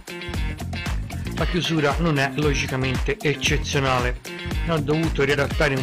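Right near the end, from about 5.30 to 5.36 s, there's a quick blip of damaged data in the compressed stream. Some bytes there got corrupted, so the decoder misread those frames and lost sync, spitting out a brief glitch for around 60 ms.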